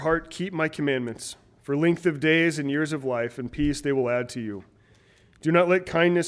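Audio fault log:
No faults are heard anywhere in the clip. Nothing in the audio calls for an entry in this log.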